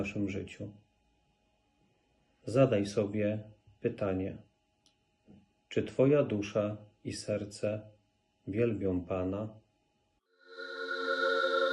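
From 10.26 s to the end at 11.73 s, the sound jumps higher and more hurried, raised about four semitones and running 1.23 times too fast. This section at the wrong speed was likely played against the wrong clock, lifting pitch and tempo together.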